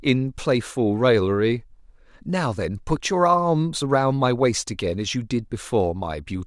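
No technical faults can be heard anywhere in the speech, so there is nothing to set out in time order.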